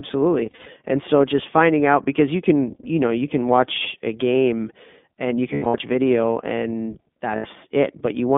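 The whole clip passes through the iLBC codec. The band runs from about 200 Hz to 3.5 kHz. The speech sounds rough and slightly synthetic. That fits the 15.2 kbps mode with 20 ms frames, each coded on its own.

There are lost iLBC frames from 0.46 to 0.67 s, from 5.54 to 5.76 s and from 7.36 to 7.47 s. The decoder fills each gap by repeating the last pitch cycle with added noise. Each gap sounds like a brief, buzzy held vowel, and the voice is right again almost at once.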